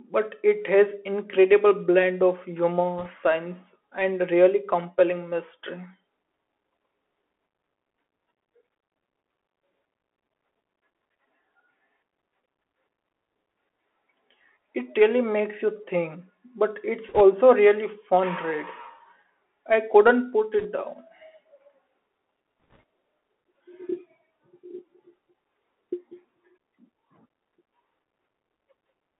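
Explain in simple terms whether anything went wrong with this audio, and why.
Yes, two things went wrong. Throughout, the speech passes through a Bluetooth CVSD headset codec, the basic voice mode of Bluetooth headsets. It keeps only a narrow phone-like band, about 250 Hz to 3.4 kHz, so the speech sounds thin. Unlike a simple muffled recording, s sounds turn scratchy and a grainy hiss sits underneath, because this coder tracks the sound in tiny up-or-down steps that can't keep pace with sharp sounds.

There are also bit errors on the Bluetooth voice link, around 2.99–3.08 s, 17.09–17.21 s, 20.60–20.66 s and 22.64–22.83 s, where a small share of the transmitted bits were flipped. Each brings a brief rushing, crackly noise rather than the loud clicks or silent gaps of lost packets, because every bit carries only a small nudge and its effect fades quickly.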